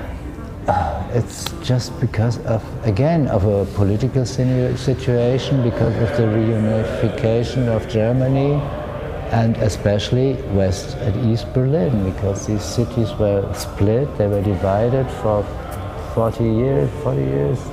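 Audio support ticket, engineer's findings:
Chunks out of order, 5.84–5.88 s: a 20 ms chunk lands one slot late, so there's a brief jumble with three hard joins. Probably the buffer queue or packet reordering.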